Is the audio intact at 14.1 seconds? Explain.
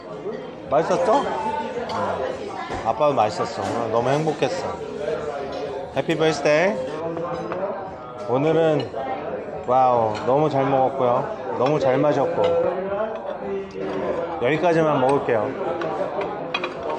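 Yes, at 14.1 seconds the audio runs cleanly, with no dropout, click, distortion or other fault audible at that point.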